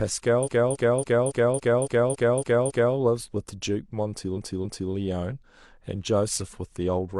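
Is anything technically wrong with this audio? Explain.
Yes. This speech has repeated frames in two places. From 0.42 to 2.93 s, a 278.6 ms block of compressed audio, which fits a run of six frames, plays nine extra times, adding about 2.51 s. From 4.32 to 4.88 s the same-sized block replays twice more, adding 0.56 s. A stutter marks each restart. Unlike an echo, the copies follow one another instead of overlapping, and the block length points to duplicated codec frames rather than a small playback buffer looping.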